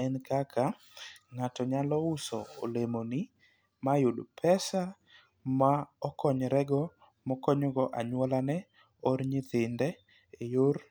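Speech, with no technical fault to be heard anywhere in the recording. The speech comes through steady and continuous, with nothing breaking into it at any point.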